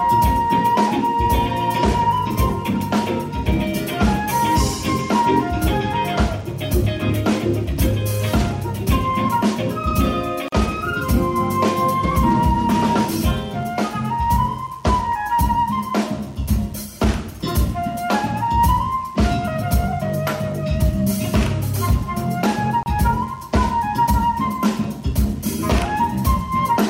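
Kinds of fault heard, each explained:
Gap at a join of encoded pieces: the audio was evidently encoded in separate chunks and spliced without trimming, so each chunk's encoder startup delay and end-of-file frame padding got left in as dead air. You hear two short dropouts in otherwise continuous sound, about 41 ms at 10.48 s and 31 ms at 22.83 s, each with edges smeared by the codec, after which the sound picks up exactly where it left off.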